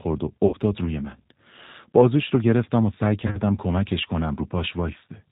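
A speech recording carried throughout by the G.729 codec: everything above 4 kHz is gone, and the voice has a slightly rough, synthetic edge that fits an 8 kbit/s frame-based vocoder. Unlike plain low-pass filtering, the coarse pulse excitation roughens the voice itself, not just its brightness. VoIP packet loss concealed by the speech codec occurs at 0.47 to 0.56 s, where about 60 ms of audio is missing, consistent with six lost 10 ms frames, and again at 3.27 to 3.39 s, where 60 ms of losses are scattered over 80 ms, the longest run 30 ms. In both places the decoder stretches the last sound into a fading buzzy tone or coloured noise, and the voice stays weak or distorted briefly after packets return, which distinguishes concealment from simple dropouts to silence.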